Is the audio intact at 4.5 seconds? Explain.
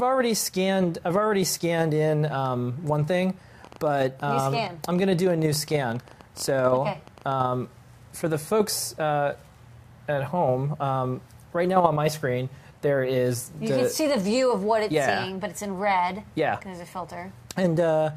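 No, there is a train of clicks from 3.65 to 7.41 s, likely from electrical interference or a faulty connection or power supply injecting repeated pulses. About twelve similar clicks per second arrive at an uneven pace, some fifty in all, popping roughly as loud as the sound itself.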